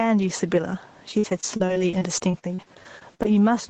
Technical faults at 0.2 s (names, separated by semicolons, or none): gain pumping